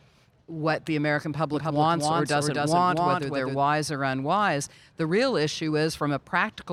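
From 1.54 s to 3.58 s the speech is shadowed by a second full-band copy trailing roughly 300 ms behind and about 5 dB quieter, cutting in and out abruptly with no reverberant tail: a doubled audio track, likely from a slower second capture path mixed in alongside the first.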